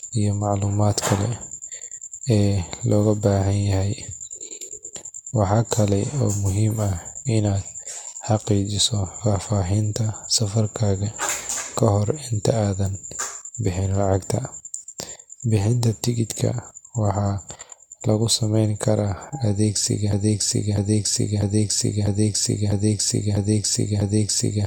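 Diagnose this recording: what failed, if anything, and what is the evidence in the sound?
At the codec stage, the speech was likely decoded and re-encoded several times through AAC-LC at 96 kbit/s, a case of generation loss. Each pass requantises the signal on a shifted frame grid, so noise and spectral holes pile up rather than cancelling. Throughout the clip the speech sounds swirly and hollow, with smeared consonant attacks, more degraded than a single 96 kbit/s encode would leave it.

A broken-record loop starts at 20.13 s and runs to the end. The player, encoder or stream likely stalled at that point and kept sending the last fragment it held. The same segment of about 0.65 s repeats exactly, back to back, seven times, so the final stretch is a stuttering cycle rather than continuing speech. Whatever should have played after 20.13 s is lost.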